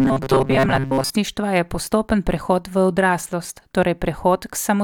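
Audio likely arrived too seldom from 0.01 to 1.1 s, causing robotic sound from repeated short buffers: a metallic 134 Hz buzz before "je postopen prehod".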